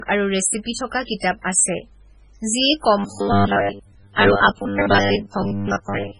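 From the start, the speech sounds dull and smeared, with the swirly, watery artefacts of heavy MP3 compression and nothing at all above 10.5 kHz. This is low-bitrate audio saved at a high bitrate: the degradation points to a very low-rate MP3 encode, around 16 kbit/s, that was likely re-encoded at a much higher rate such as 192 kbit/s. The second pass only enlarges the file; the detail removed by the first encode cannot come back.

From 2.98 s to the end, the speech turns into a rigid, metallic buzz pitched at 100 Hz. The syllables still roughly follow the speech's rhythm. This is robotic sound from repeated short buffers. A 100 Hz buzz fits a repeated chunk about 10 ms long. New audio is likely arriving too slowly, so the playback loops the last short buffer to fill the gaps. Most of the real signal in this stretch is replaced by these repeats and never heard.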